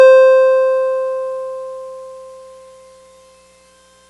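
No technical faults can be heard in this music.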